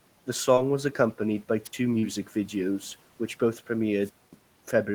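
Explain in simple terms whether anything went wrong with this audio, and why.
At 0.55 s and again at 1.99 s, the speech briefly smears or wobbles. This is short concealed packet loss: a few hundredths of a second went missing, and the receiver stretched the preceding sound to fill the gap.

At 1.64 s and 4.00 to 4.37 s, a hiss swells and the audio drops almost to silence, the second time for about a quarter second. This is a wireless microphone squelch dropout: the radio signal faded, and the receiver muted its output until the signal returned.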